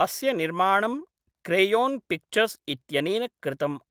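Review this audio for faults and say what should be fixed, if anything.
No faults; nothing needs fixing.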